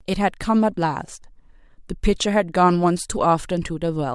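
Speech recording with no audible technical faults.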